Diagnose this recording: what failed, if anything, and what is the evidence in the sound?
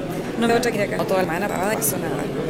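Audio missing between chunks, at the driver or buffer stage. The sound skips at 0.49, 0.74, 0.99, 1.24, 1.49 and 1.74 s, each jump spliced straight through without silence. The likely cause is about 300 ms being dropped at each changeover between 0.5 s processing chunks.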